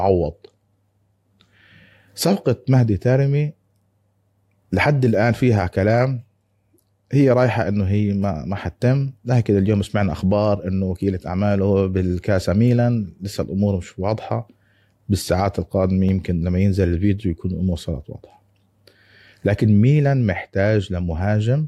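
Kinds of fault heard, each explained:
No technical faults detected in the speech recording; signal path checks out.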